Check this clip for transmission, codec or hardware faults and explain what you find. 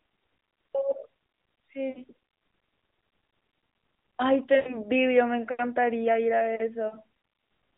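Two faults are present in this speech clip, heard through narrowband AMR mobile coding that limits the sound to roughly 200 Hz to 3.7 kHz.

Lost AMR speech frames at 1.90–2.02 s, 4.56–4.86 s and 6.88–6.97 s: failed frames were concealed by repeating earlier pitch and vocal-tract settings, producing brief smeared, warbling dips lasting about 60, 100 and 40 ms.

Channel delay (comb filtering) from 6.44 s to the end: one channel lags by a couple of samples, about 0.05 ms, and the mono sum places its first cancellation notch near 10 kHz, giving a dulled top end.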